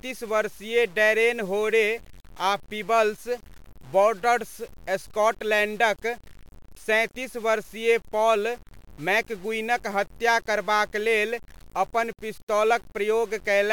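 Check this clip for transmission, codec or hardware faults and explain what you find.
There's one fault, and it runs through the whole clip: low bit depth without dither. The speech has a grainy, gritty edge that moves with every syllable, sitting roughly 30 dB down, and the quietest tails sputter or drop out. That's likely the audio being truncated to about 7 bits with no dither, so the rounding error tracks the signal instead of spreading into steady, neutral hiss.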